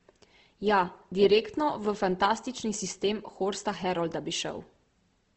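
Throughout the speech, the audio has likely gone through Opus compression in its music mode, at a rate that fits 16 kbps. Short of bits, the encoder fills bands with noise or folded copies, so tones turn plainly rough and grainy, and nothing reaches above 8.3 kHz.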